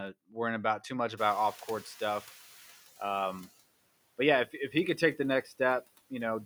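A speech recording in which the room noise jumps by about 22 dB at roughly 1 s. The noise suppressor catches up slowly: from 1.17 s, after "worrying about too much", the louder background passes with little reduction and then sinks by about 11 dB over the 2.3 s to 3.47 s as the noise estimate adapts. Later, just after "he could take the", the noise suppressor cuts speech at 5.44 to 5.6 s. It mistakes about a tenth of a second of quiet speech for noise and drops it by up to about 10 dB, so the sound there comes out swallowed and faint.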